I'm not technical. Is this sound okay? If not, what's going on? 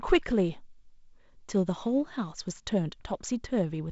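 Yes, nothing in this recording sounds wrong.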